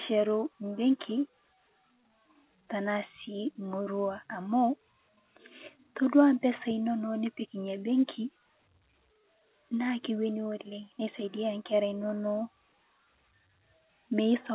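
No technical faults can be heard in this speech clip. It carries the narrow band of A-law G.711 telephone coding, with nothing above 4 kHz and a faint grain that rises and falls with the level of the speech.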